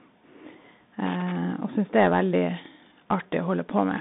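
Bluetooth CVSD headset codec, present from start to finish: the speech has passed through the narrowband headset path, which encodes one bit per sample stating only whether the waveform rises or falls, with an adapting step size. The band is confined to roughly 150 Hz to 3.7 kHz, with nothing above 3.8 kHz, which fits a 64 kbit/s CVSD link. The damage is plainly audible as a granular hiss under the speech, with scratchy sibilants where the step cannot keep up.

Loose connector crackle, from 1.06 to 1.36 s: for about 0.3 s a contact somewhere in the chain kept making and breaking, chopping the signal in rapid, irregular fragments. The result is a short burst of scratchy crackle cutting across the speech, distinct from the steady codec hiss, with a ragged texture that comes from the connection flickering on and off rather than from any processing of the sound itself.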